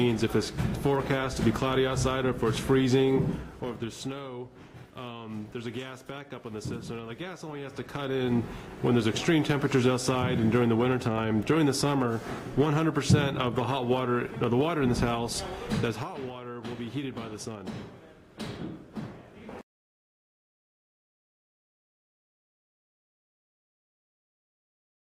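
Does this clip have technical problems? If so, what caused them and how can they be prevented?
Yes. From 15.8 to 16.12 s there's zipper noise: a drop of around 10 dB lands in 1 dB jumps, roughly thirty a second, with no smoothing between them, so each jump clicks and you hear a quick zipping over the sound. To prevent it, interpolate the gain sample by sample or ramp it across each buffer rather than jumping straight to the new value.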